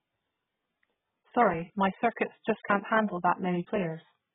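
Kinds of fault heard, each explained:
AAC compression: Heavy codec damage runs through the whole speech clip, with nothing above about 3.7 kHz, which is likely the work of AAC-LC at a very low bitrate, the sound fitting roughly 8 kbps. The encoder splits the audio into frames of frequency lines and spends its few bits only where a hearing model says they matter most, so it lowers the cut-off and thins or substitutes the remaining bands, leaving the speech dull and smeared.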